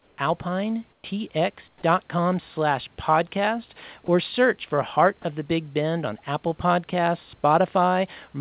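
From 0.0 to 0.18 s and again from 0.92 to 1.04 s, comfort noise takes the place of the background: the room hiss turns into a flat, detail-free noise about 5 dB quieter. This is likely discontinuous transmission filling pauses. Only background is affected; no speech goes missing.

At 1.68 to 1.82 s, 4.06 to 4.08 s and 5.22 to 5.24 s, sound is dropped by the voice detector. Brief bits of speech, around 70 ms at the first point and 10 to 20 ms later, give way to that same steady noise, likely because the voice detector took them for background. Unlike the comfort-noise passages, here actual speech disappears.

Throughout, the call codec's band limit leaves nothing above 4 kHz.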